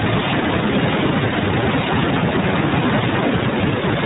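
Speech coded throughout with the iLBC codec: a hard spectrogram ceiling at 4 kHz, and a plainly rough, synthetic texture from independently coded 30 ms frames, fitting its 13.33 kbps mode.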